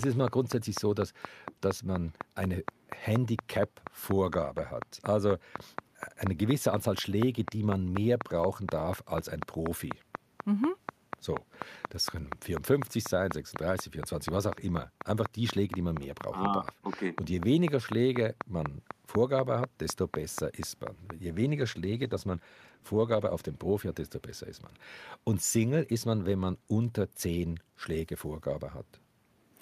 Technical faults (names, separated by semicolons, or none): train of clicks; call bitrate drop